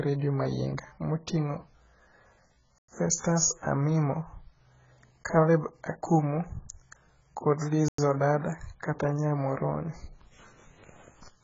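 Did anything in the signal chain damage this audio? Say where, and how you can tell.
Yes. The speech sounds dull and smeared throughout, with a warbling, fizzy texture and nothing above 7.5 kHz. That is heavy AAC compression damage at the codec stage, likely from AAC-LC coding at a low bitrate around 12 kbps, where quantisation strips out high bands.

Hard-edged silences of 100 ms cut into the speech at 2.78 to 2.88 s and 7.88 to 7.98 s, 5.1 s apart. This gap between chunks arises at storage or playback, where padding or late starts leave silence between 5-second segments.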